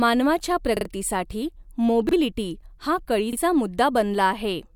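A speech clip with three repeated-buffer stutters. New audio did not reach the output in time, so the last block played again. Each block lasts about 43 ms, which fits a 2048-sample buffer. From 0.77 to 0.85 s one block sounds three times, and roughly 100 ms of speech is lost. At 2.09 to 2.13 s and 3.33 to 3.37 s a block sounds twice, losing about 40 ms each time. Each repeat starts with a hard join.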